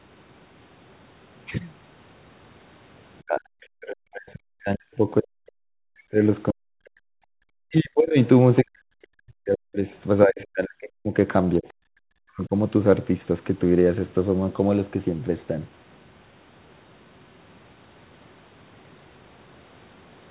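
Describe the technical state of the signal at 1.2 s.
At 1.2 s the speech is intact, with no dropout, click, distortion or other fault, only the narrow telephone-band sound of the call path, which tops out at 4 kHz.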